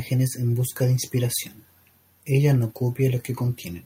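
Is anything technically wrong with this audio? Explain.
No, nothing is technically wrong.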